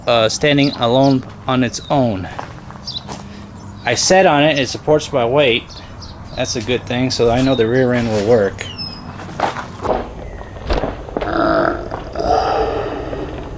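From 9.87 s to the end at 13.57 s, the sound drops a full octave and runs at half speed. This wrong sample rate fits 32 kHz material played back at 16 kHz.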